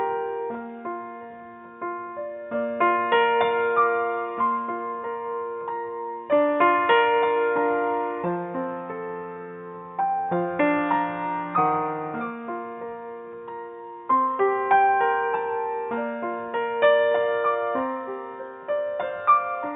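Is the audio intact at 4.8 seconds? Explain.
Yes, the audio is intact at 4.8 seconds, with no dropout, click, distortion or other fault audible at that point.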